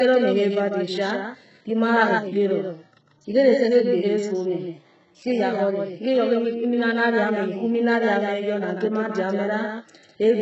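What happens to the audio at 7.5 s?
At 7.5 s, as everywhere in the clip, the speech has a doubled audio track: a second full-band copy about 150 ms behind and roughly 5 dB quieter, likely from a slower second capture path. There's also heavy HE-AAC compression, likely at a very low bitrate around 8 kbps. The treble is rebuilt from copied lower bands and stops by 8 kHz, so s sounds come out gritty or lispy.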